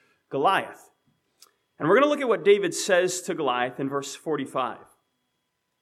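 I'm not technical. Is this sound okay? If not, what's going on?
Yes, it sounds fine; nothing wrong is audible.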